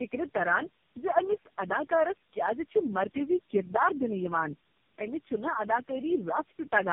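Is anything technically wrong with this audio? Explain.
Yes. Throughout the speech sounds rough, muffled and warbly, with nothing above 3.5 kHz. This is tandem speech coding: the sound points to several low-rate speech codecs in series, each decoding and re-encoding the previous one's already degraded output, so the damage compounds.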